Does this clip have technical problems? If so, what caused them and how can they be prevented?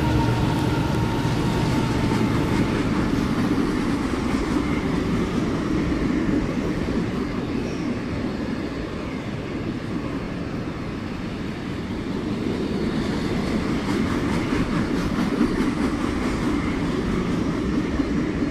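Yes. At 10.25 to 10.27 s there is a Bluetooth stutter. A wireless audio packet arrived late or not at all, and the receiver replayed its previous buffer. About 23 ms of sound repeats as a brief stutter, which fits a single lost packet, and the audio then resumes further along. Keeping the devices close, with a clear line of sight and away from crowded 2.4 GHz traffic, prevents this.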